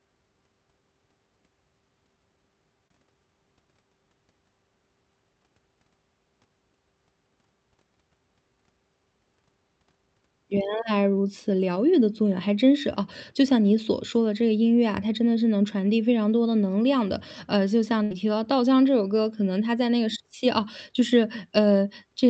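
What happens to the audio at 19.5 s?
Nothing goes wrong at 19.5 s; the speech carries on intact through that moment, with no dropout, click, distortion or other audible fault.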